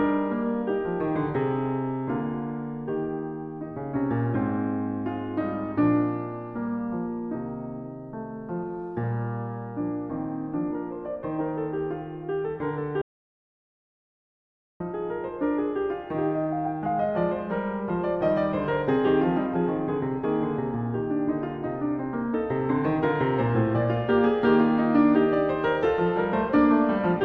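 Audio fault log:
13.02–14.80 s: audio dropout to silence. The music cuts off mid-flow for about 1.79 s of silence with no room tone, likely lost input while recording continued.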